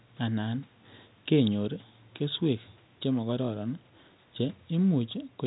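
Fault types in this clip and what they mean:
No faults can be heard in this speech clip. It carries the narrow band of G.711 telephone coding, with nothing above about 3.9 kHz, and the lowest bass is trimmed as normal call microphone processing does.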